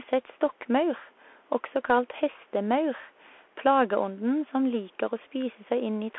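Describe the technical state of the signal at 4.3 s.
At 4.3 s the speech sounds thin and boxed-in, with scratchy s sounds, a granular hiss underneath, and distortion on loud high sounds. The cause is the Bluetooth CVSD headset codec, present across the whole clip. It carries only about 300 Hz to 3.4 kHz. Each sample is a single up-or-down bit, which fits a 64 kbps link, and an adaptive step size cannot keep pace with sharp high-frequency swings, leaving plainly audible damage.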